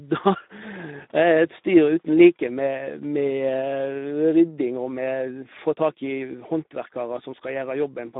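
Speech that sounds hoarse and grainy from start to finish, with a boxy, narrow quality. The band runs from roughly 200 Hz to 3.7 kHz and nothing is present above 3.8 kHz. This is Speex codec damage, plainly audible. The CELP coder has too few bits to model the excitation faithfully, which fits a setting around 11 kbps. That shortfall leaves the rough texture on top of the telephone-style band limit.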